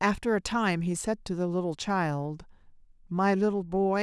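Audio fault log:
No technical faults can be heard in the recording, and the speech signal stays continuous and intact throughout.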